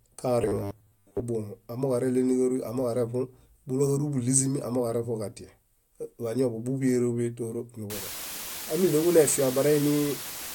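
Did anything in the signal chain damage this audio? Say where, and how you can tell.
Yes. From 0.42 to 1.23 s the sound turns into a rigid, metallic robotic buzz at 100 Hz. This points to the driver or buffer stage, likely starved of input and repeating 10 ms chunks while most of the real audio is skipped. A spectrogram shows fixed harmonics every 100 Hz, and the waveform shows copies of the same short segment.

From 7.90 s to the end, a constant, even hiss sits only about 10 dB below the signal, with no distortion. This is low bit depth with dither at sample-format conversion: rounding to 5 bits with dither turns the error into white noise. On a spectrogram this appears as a flat, broadband noise floor, and the waveform becomes a thick, fuzzy band.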